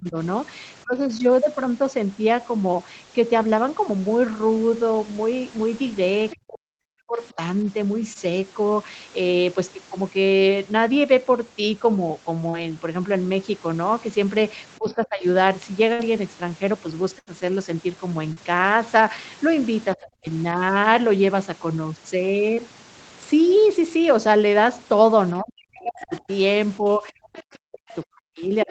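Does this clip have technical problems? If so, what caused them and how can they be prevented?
Yes. The speech suppressed in double talk appears at 0.0–0.95, 6.44–7.37, 14.77–15.24, 19.95–20.26 s and from 25.4 s to the end. The speech dips sharply, by up to about 40 dB, likely because the echo canceller muted everything during overlap. A better-tuned double-talk detector would prevent this.

The other side's voice leaks through at 6.3–7.33 s and from 25.99 s onward, about 20 dB below the speech, likely as residual loudspeaker echo. Stronger echo cancellation or a headset would prevent this.

Short concealed packet loss at 8.13–8.17, 12.49–12.55, 18.33–18.38 and 22.54–22.59 s leaves brief smears where 20–40 ms gaps were filled. A more stable network or forward error correction would reduce these.

A burst of packet loss at 15.93–16.01 and 17.19–17.29 s replaces 60 and 80 ms with fading held sound. 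A deeper jitter buffer and a steadier connection would help.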